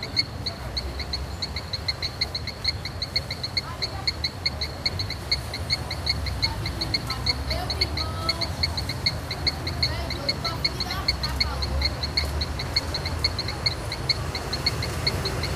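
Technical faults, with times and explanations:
2.01–2.29 s, 9.28–9.97 s, 12.17–13.04 s: DAB burbling. Bit errors of roughly 0.4 to 1 percent slip past error correction, so wrong samples put short blips of noise in single MP2 sub-bands. A spectrogram shows scattered short rectangular blocks in narrow bands, and the waveform shows jittery level bumps.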